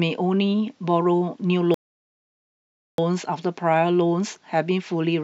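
At 1.74 s a rebuffering stall halts the speech for 1.24 s of silence, shown as a flat waveform gap, before resuming seamlessly at 2.98 s.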